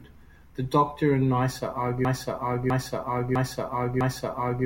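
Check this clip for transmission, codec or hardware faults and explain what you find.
One transmission fault is present: a broken-record loop running from 2.05 s to the end of the clip. The playback or streaming chain likely stalled and kept resending the last fragment it held in its buffer. A 0.65 s stretch of speech repeats exactly, back to back, four times, with no fresh audio arriving. Whatever should have followed after 2.05 s is missing, and the clip ends still caught in the loop.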